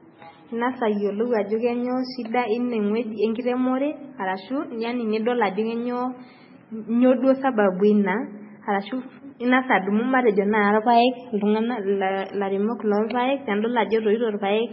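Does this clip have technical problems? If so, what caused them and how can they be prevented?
Yes. Throughout the speech there is a hard ceiling with nothing above about 5.6 kHz, plus smeared, watery swirls overlaid with a second, grainier layer of artefacts. This is likely transcoding between lossy codecs: the sound points to a very low-rate MP3, around 16 kbit/s, later re-encoded to WMA at a higher rate. The WMA encoder spends bits preserving the MP3 damage and adds its own, while the MP3's low cut-off remains. On a spectrogram this appears as a flat, empty band above 5.6 kHz with blotchy, patchy energy below it. Prevent it by encoding once, directly from the original uncompressed recording.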